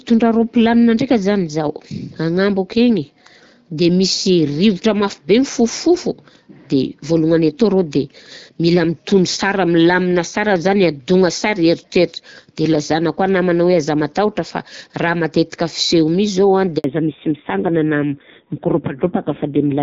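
A handover gap at 16.78 s silences the speech for 60 ms as the call switches networks and no frames arrive until the new link starts.

A fallback to narrowband follows at 16.84 s and lasts to the end. Everything above 4 kHz disappears, leaving duller, rougher speech that fits a drop to 5.9 kbit/s AMR narrowband.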